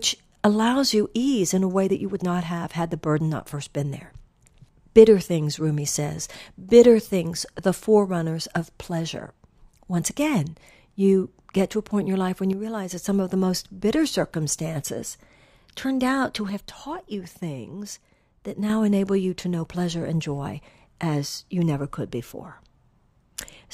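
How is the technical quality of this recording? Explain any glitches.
The recording has two glitches of the same kind. One channel drops out from 12.53 to 12.91 s, just after "in your life when", and again from 16.50 to 18.70 s, after "circumstances turned out to". In both stretches the speech abruptly falls by about 6 dB and then snaps back. The likely cause is one stereo channel going silent. When the pair is summed to mono, the shared content loses half its contribution.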